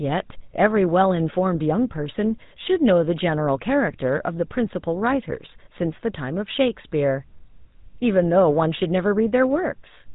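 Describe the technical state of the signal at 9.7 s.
At 9.7 s the speech has a buzzy, gravelly roughness and a dull, boxed-in top end with nothing above 4 kHz, and that character runs through the whole clip. This is the GSM full-rate codec, plainly audible here, and the sound fits its 13 kbps coder. It rebuilds the voice from a vocal-tract model driven by evenly spaced pulses, keeping only every third excitation sample, so the natural fine detail gives way to that coarse buzz.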